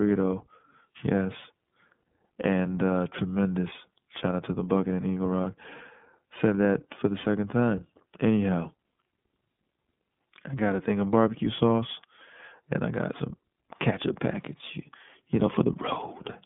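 From start to finish the speech sounds thin and boxed-in, slightly rough and synthetic, with plainly audible coding damage. This is the iLBC codec: a narrowband line passing roughly 150 Hz to 3.5 kHz, coding each frame independently, which fits 30 ms frames at 13.33 kbps.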